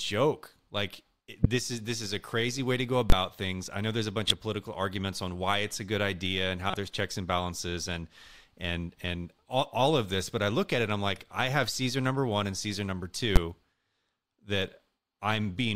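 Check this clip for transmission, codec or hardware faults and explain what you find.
Five faults turn up in the speech, of two kinds: three corrupt frames that the decoder played anyway, and two blocks of invalid numbers pinned at full scale.

Corrupt frame decoded, at 1.43–1.46 s, 4.27–4.31 s and 6.70–6.74 s: flipped bits in the compressed data (about one frame hit, then two, then two) were decoded regardless. The misread gains and codes put energy at the wrong frequencies, so each spot is a brief chirpy burst peaking around -10, -10 and -15 dBFS.

Invalid numbers at full scale, at 3.10–3.12 s and at 13.36 s: a calculation produced infinite or invalid values, which were forced to maximum output for a whole block. The first lasts 23 ms, fitting a 1024-sample block, and the second 12 ms, fitting 512 samples. Both are so short that each is heard as a single loud bang.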